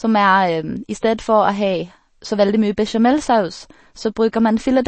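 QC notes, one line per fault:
Throughout, MP3 compression: the speech sounds watery and swirly, attacks are smeared, s sounds carry metallic chirps, and nothing is left above 8.3 kHz, so the top end is dull. The likely cause is an encoder starved of bits, which fits a bitrate around 32 kbps. It cuts the treble at a fixed ceiling and zeroes weak frequency lines, which then flicker on and off from frame to frame.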